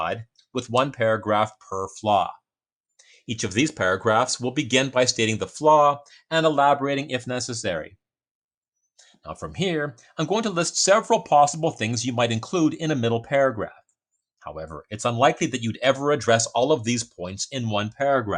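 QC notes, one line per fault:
No faults found on listening; nothing to log.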